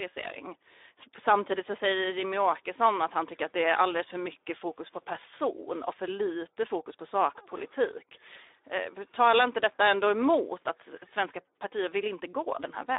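The speech passed through a Speex codec at a low setting, about 11 kbps, over a phone-style band of roughly 300 Hz to 3.7 kHz. Too few bits remain for the excitation, so the speech sounds plainly hoarse and grainy throughout, with nothing above 3.8 kHz.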